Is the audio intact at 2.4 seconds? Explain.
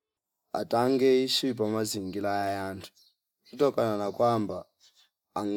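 No. From 2.42 to 2.49 s, roughly 80 ms, the speech is interrupted by a corrupt frame decoded fault. Bits in the compressed stream were damaged, and the decoder played the affected frames anyway, misreading gains and spectral codes so that energy lands at the wrong frequencies. The span points to a handful of consecutive frames, on the order of four. It comes through as a short chirpy burst of noise, peaking around -30 dBFS.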